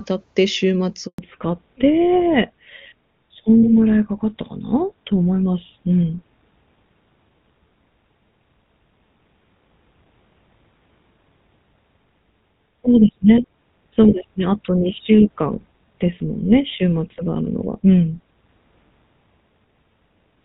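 At 1.06 s a handover gap cuts the speech for 120 ms, until 1.18 s: the waveform collapses to a flat line and the spectrogram shows a blank vertical strip.

From 1.18 s to the end, a fallback to narrowband removes everything above 4 kHz, which fits a switch from AMR-WB to GSM full rate. The spectrogram shows a hard ceiling, and the speech sounds duller and rougher.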